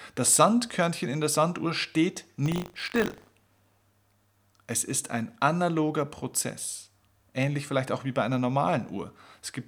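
Speech, with buffer tearing from 2.44 to 3.93 s. A robotic buzz at 50 Hz rides on the sound, which fits a 20 ms buffer period. Writer and reader have slipped. A small slice of each period repeats audio from around 70 ms earlier, with hard joins.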